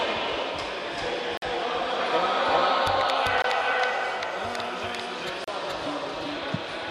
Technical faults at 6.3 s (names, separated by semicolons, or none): doubled audio track